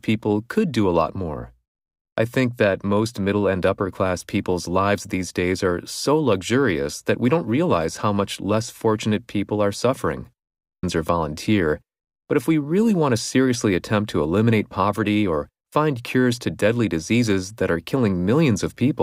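Speech with an abrupt jump ahead and a small blip at 10.83 s, likely a stream segment skipped when one segment failed to load.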